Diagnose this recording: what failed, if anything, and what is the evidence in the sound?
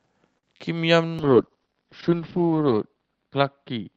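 The first fault is a short stall from a late packet, at the network and jitter-buffer stage. From 0.37 to 0.45 s the speech hangs on one sound. About 56 ms of held audio fills the gap, and the stretch has a slight buzz or dip. Nothing is lost. The speech then picks up exactly where it stopped. A packet arrived late and the buffer ran dry. The receiver extended the last sound and waited. The playout delay grew by 56 ms as a result.

The second fault is short concealed packet loss, also a network fault handled by the decoder. Between 0.57 and 0.61 s there is a brief smear or wobble. Here about 20 ms of real audio never arrived. The decoder covered the gap with roughly 18 ms of synthesised continuation, carrying on from the previous sound. It then blended back into the real signal.

The third fault is a call bitrate drop, a network problem that acts on the codec. From 1.19 s to the end of the clip the speech turns coarse, and it loses brightness. 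The Opus stream, which had been running cleanly at 64 kbps, was pushed down to 7 kbps. It stayed at that floor for 1.4 s. The audio bandwidth also narrowed from 8 kHz to 6 kHz, which removes the top of the sibilants.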